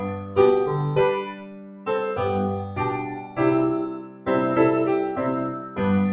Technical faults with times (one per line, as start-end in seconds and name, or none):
0.00-6.12 noise suppressor applied to music or sounds
0.00-0.37 sound cut by the noise suppressor
1.23-1.88 sound cut by the noise suppressor
3.15-3.38 sound cut by the noise suppressor
3.93-4.28 sound cut by the noise suppressor
5.52-5.79 sound cut by the noise suppressor